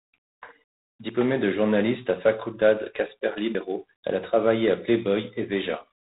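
G.726 ADPCM coding runs through the whole of this speech recording at 24 kbit/s, and the damage is plainly audible. Each sample is sent as a small difference from an adaptive prediction, and at this rate too few bits are left to track the waveform. A harsh, rasping hiss rides on the voice and rises and falls with its level, and nothing above 3.9 kHz passes, so everything sounds narrow and telephone-like. Audio missing between chunks shows up as two abrupt skips at 1.09 s and 3.55 s. Each removes roughly 40 ms, and the material on either side is butted together with no silence between. The two skips sit about 2.5 s apart, which points to a recorder or processor working in 2.5 s blocks and likely dropping a short stretch each time it closes one block and opens the next.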